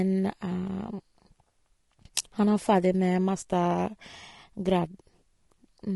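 From start to finish the speech sounds rough and grainy, with a hiss filling the gaps between pitch harmonics and a dull, artificial top end. The likely cause is low-delay AAC compression (AAC-ELD), whose short frames blur harmonics, and the damage fits a bitrate around 32 kbps.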